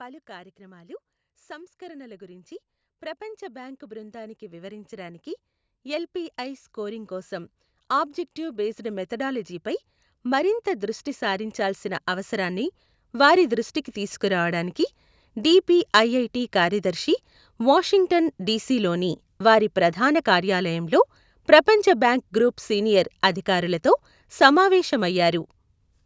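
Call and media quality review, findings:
Automatic gain rising, 0.26–14.51 s: AGC judged input too quiet, ramped gain up about 24 dB; speech and background swell together, steadily louder across that span.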